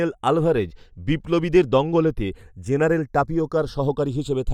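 Throughout, the channels drift apart: clocks around 100 ppm apart slide their delay, so mono sweeps like slow flanging, not a static comb.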